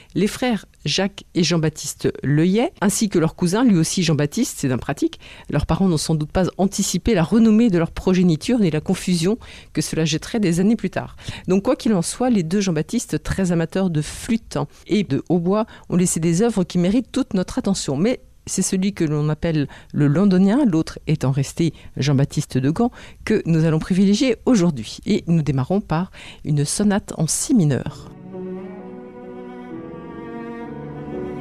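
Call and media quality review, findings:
No faults found in this audio.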